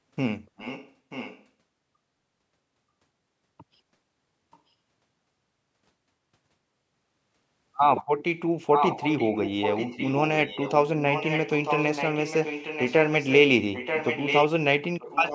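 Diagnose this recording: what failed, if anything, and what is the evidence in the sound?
Echo leak at the call-processing stage: a copy of the speech returns about 0.94 s late at 0.57–0.94, 1.1–1.46, 4.51–4.59, 8.74–10.29, 10.45–10.72, 11.08–13.38, 13.73–14.48 and 14.99–15.34 s, from faint to nearly as loud as the speech. The likely cause is a far-end loudspeaker echo canceller passing residual microphone pickup back down the line.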